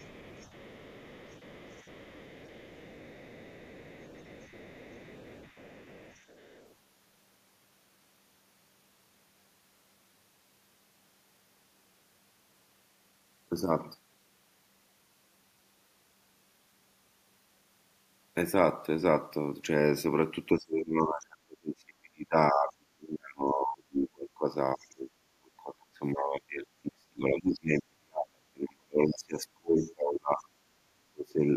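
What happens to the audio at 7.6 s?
Nothing goes wrong at 7.6 s; the speech carries straight through that moment with no dropout, click or other disturbance.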